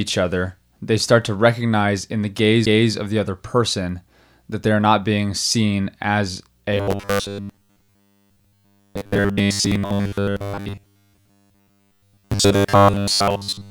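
At 2.66 s, just after "to recognize in the", a tick and a dropout of around 10 ms cut in, and the speech resumes at "of the other person." This is a CD skip, where the laser jumped to another turn of the spiral.

From 6.73 s, after "not being seen as," to the end, the speech turns into a rigid metallic buzz at 100 Hz. This is robotic sound from repeated short buffers, likely caused by 10 ms chunks being replayed in place of most of the real audio.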